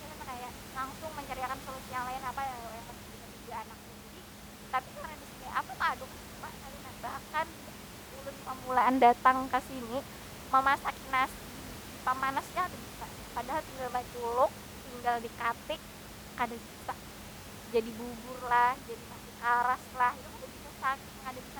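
Nothing goes wrong in this speech recording; the only thing to hear besides the talking is some ordinary room noise sitting about 15 dB below the speech, which is just part of the space the microphone was in.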